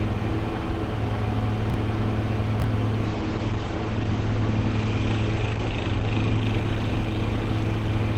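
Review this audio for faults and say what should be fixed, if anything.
Brief jumbled stutters at 1.70–1.74 s and again at 2.60–2.64 s are chunks out of order: in each spot a 20 ms chunk arrived one position late and played after its neighbour, leaving hard joins. A jitter buffer that reorders packets by sequence number before playback would prevent this.

From 3.04 s to the end the sound turns rough, watery and muffled. This is a call bitrate drop: the encoder was pushed from 32 kbps down to 12 kbps, coding more coarsely and narrowing the bandwidth from 20 kHz to 8 kHz, with the lowest rate holding for 2.64 s. Setting a higher minimum bitrate floor would prevent this.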